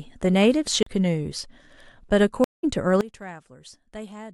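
Right at 0.83 s there's a CD skip, running to about 0.86 s. You get a tiny tick, a mute of roughly 40 ms, and then the speech picks up from a different spot. That's the laser being knocked off its track and landing on another turn of the disc's spiral, so the playback position jumps rather than just pausing. It's short, but the discontinuity in the speech gives it away.

Around 2.44 s the audio drops out for 145 ms and comes back at 2.64 s. That's a stream reconnect: the connection fell over, the player sat silent while it re-established the link, then spun up a fresh decoder mid-stream. Because the stream kept moving while it was gone, the speech resumes roughly a tenth of a second further on than where it stopped, so a little bit is simply skipped. The re-entry has that cold-start feel of a decoder starting from scratch.

From 3.01 s to the end, the level falls by about 20 dB and what's left sounds faint, with the centred speech mostly cancelled out. 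That's the signature of one channel inverted: one side of the stereo pair has flipped polarity, and when the two are summed to mono the shared centre content cancels. The likely cause is that flipped channel, leaving only the small differences between left and right.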